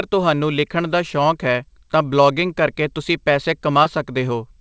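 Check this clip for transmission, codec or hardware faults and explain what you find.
One transmission fault stands out in this speech, which comes through a call path whose G.722 coding at 64 kbps leaves nothing above 8 kHz. From 3.84 to 3.87 s there is a brief smear or wobble. This is short concealed packet loss. About 20 ms of audio missed the decoder's deadline, and the receiver papered over the gap by extending the preceding sound before blending back into the real signal.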